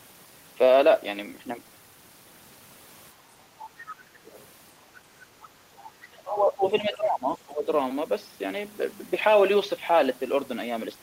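From 3.14 to 3.55 s the echo canceller clamped down on the microphone while its loudspeaker was active, so the background is gated by the echo canceller. For roughly 300 ms of that stretch the room tone sinks by up to about 6 dB, a brief hollow dip where the ambience thins out before recovering once the canceller releases.

At 3.88 to 4.47 s and again at 5.42 to 5.84 s, the other side's voice is leaking through. A second, fainter voice sits underneath the talker, around 20 dB down in the first stretch and nearer 30 dB down in the second, barely present in the later one. The likely cause is that the far end, played on the talker's loudspeaker, was not fully subtracted from the microphone signal, so residual echo slips past the canceller.

From 6.08 to 7.68 s the talker's speech is suppressed in double talk. For about a second and a half the voice sags, by as much as roughly 25 dB at its deepest, so it sounds pushed back and partly swallowed. 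Within that span, at 6.67 to 6.71 s, a short scrap of the other side's voice breaks through around 25 dB below the talker. This likely happened because both ends spoke at once and the canceller, unable to tell its own talker from the returning echo, attenuated everything together.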